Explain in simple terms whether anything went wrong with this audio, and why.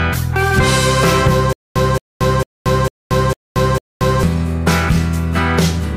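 From 1.53 s to 4.23 s there is a stutter with silent gaps: a fragment of about 0.22 s repeats six times, each time followed by about 0.23 s of dead silence. The playback most likely stalled, replaying its last piece on each retry, so the real audio there is lost.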